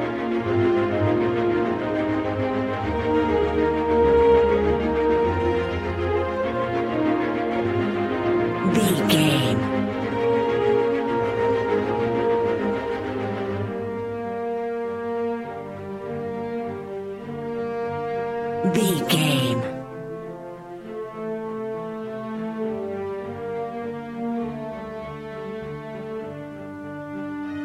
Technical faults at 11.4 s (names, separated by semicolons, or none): none